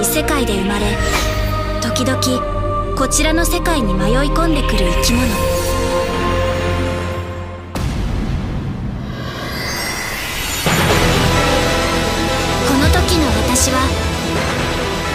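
No technical faults occur anywhere in the audio, so there are none to describe in time order.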